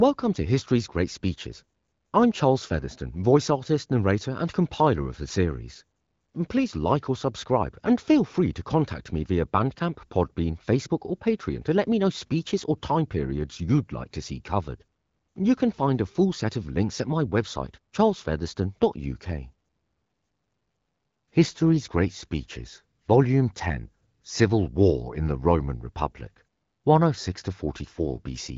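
No technical faults can be heard in the speech, which arrives through the AMR wideband (HD Voice) codec with nothing above about 7.4 kHz and only a light coding character that fits a rate of around 15.85 kbit/s.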